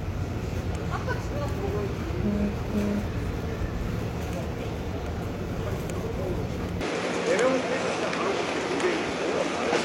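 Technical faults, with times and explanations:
6.81–9.85 s, input switched to a poorer device: the sound abruptly loses everything above 11 kHz, shifts in level by a few decibels and gains a new, faint background hiss with no gap at the switch. That combined change most likely comes from a different input, unlike a plain filter, which would leave the noise floor unchanged.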